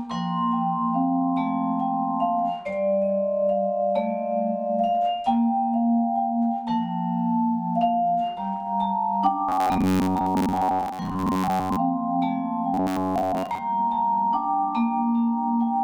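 From 9.49 to 11.77 s and 12.74 to 13.61 s, robotic sound from repeated short buffers likely comes from replaying most of roughly 10.7 ms chunks. This gives a rigid 93.8 Hz buzz, seen as evenly spaced harmonic stripes on a spectrogram and a periodically repeating waveform.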